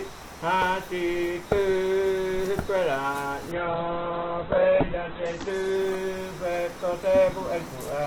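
From 3.52 to 7.33 s, a call bitrate drop starves the encoder, cutting bandwidth from 20 kHz to 4 kHz and coarsening the sound continuously, without packet-loss gaps.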